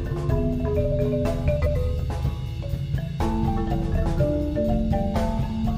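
At 1.57 to 1.76 s the audio has frames out of order: two adjacent blocks of about 93 ms each, consistent with four frames apiece, were decoded in swapped sequence. The stretch plays with its halves exchanged, giving a garbled flutter, and no time is lost.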